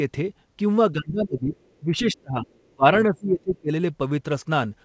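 From 0.92 to 1.53 s the echo canceller appears to have met double talk, the far side speaking while the near talker continued, and, likely unable to tell its own talker from the loudspeaker echo, it clamped down on both. The result is speech suppressed in double talk: the voice sags by roughly 20 dB at its deepest, thinning and breaking into fragments for most of that stretch. The same failure returns from 1.82 to 2.47 s and again from 2.68 to 3.71 s, now cutting deeper, around 25 dB, so the talker drops out in uneven pieces, the last episode lasting about a second.

Overlapping the end of the first episode, between 1.38 and 1.56 s, the canceller also fails in the other direction: it leaves part of the loudspeaker signal in the microphone feed, so the other side's voice is leaking through. This is likely residual echo that was not fully subtracted. It is faint, sitting roughly 25 dB under the talker, and is heard as a brief scrap of a second voice beneath the suppressed speech. 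Throughout, nothing reaches above 8 kHz, which fits a G.722 call path at 64 kbps.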